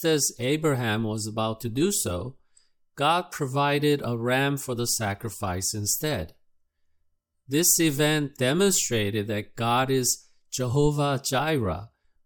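No technical faults can be heard anywhere in this clip.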